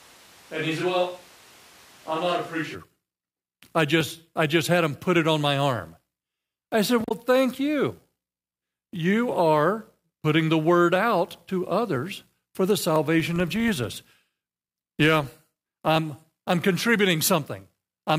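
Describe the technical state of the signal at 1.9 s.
A switch to a distant microphone covers 1.9 s, running from the start of the clip to 2.74 s. The close microphone's feed was likely lost, leaving a farther pickup: the voice sounds roomy, hollow and thin, about 5 dB quieter, with room noise raised to about 25 dB below the speech.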